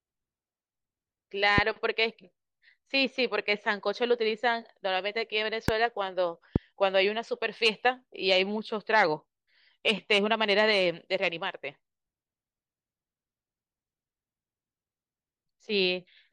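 Three sharp single pops cut through the speech, at 1.58–1.60, 5.68–5.71 and 6.56–6.58 s, each very brief and roughly 15 dB above it. These loud pops likely come from voltage spikes, such as static or a switching glitch, added to the signal.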